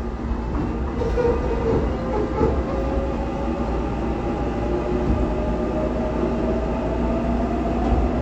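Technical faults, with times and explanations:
No technical faults can be heard in this audio.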